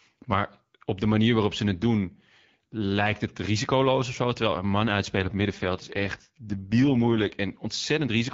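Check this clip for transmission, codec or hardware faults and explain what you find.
One fault stands out, an AMR rate drop between about 5.15 and 7.36 s. Before it, the AMR wideband (HD Voice) coding is clear, with only light codec colouring that fits 12.65 kbit/s. Across that stretch the speech turns rough and raspy, which fits the link falling back to 6.6 kbit/s so more bits can go to error protection. The waveform stays continuous with no gap, and the spectrogram keeps the same 7 kHz ceiling while the harmonics grow smeared and noisier until the rate recovers.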